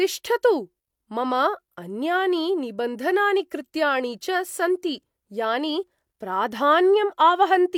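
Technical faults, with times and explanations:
No technical faults can be heard in this speech clip. There is nothing to mark with a time or to explain.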